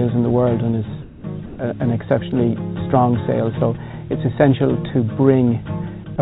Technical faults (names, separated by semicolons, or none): comfort noise in place of the background